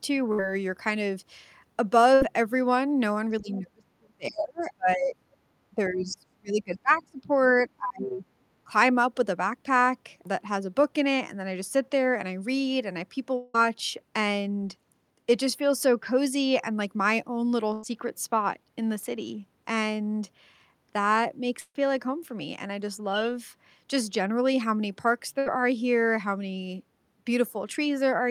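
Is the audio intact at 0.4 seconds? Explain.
No. A burst of packet loss runs from 0.32 to 0.40 s, ending right there. About 60 ms of audio never arrived. The receiver stretched the last sound and faded it over the gap. Playback resumes later in the sound, with the missing stretch skipped.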